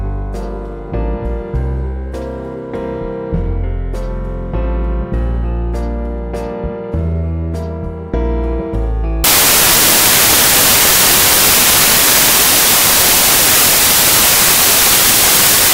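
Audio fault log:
9.24 to 15.73 s: samples built from the wrong bytes. From here to the end, loud, harsh broadband noise fills the sound. Each sample's bytes are misassembled, so noisy low bits dominate.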